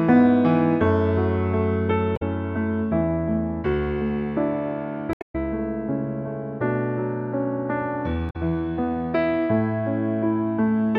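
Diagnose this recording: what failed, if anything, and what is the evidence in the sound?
Three short bursts of damage break up the sound: one from 2.13 to 2.22 s, a longer one from 5.11 to 5.35 s that also adds about 75 ms to the running time, and one from 8.29 to 8.36 s. This is damaged data in a compressed stream, a codec- and storage-stage failure. Corrupted bytes made the decoder misread frames, lose sync and hunt for the next valid frame header, emitting garbled output meanwhile.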